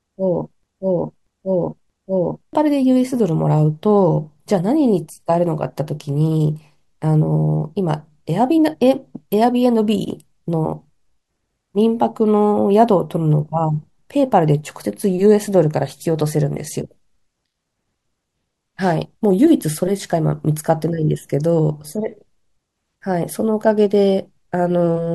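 A broken-record loop runs from 0.0 to 2.53 s, already under way when the speech begins: a 0.63 s fragment repeats exactly, back to back, three times. The likely cause is a stalled player or stream resending its last buffered piece, so the audio due then is lost.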